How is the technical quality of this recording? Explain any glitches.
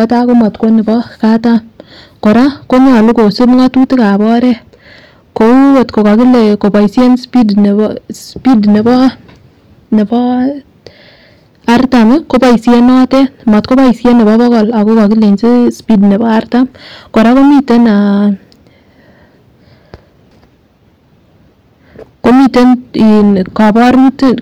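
The recording is heavily overdriven from start to finish, with hard clipping. The speech was pushed about 14 dB past what the signal path could pass, so roughly one sample in seven is sliced flat. That adds a harsh, gritty fuzz on every loud syllable. Unlike soft saturation, the tops are cut abruptly, giving a brittle high-frequency edge rather than warm thickening.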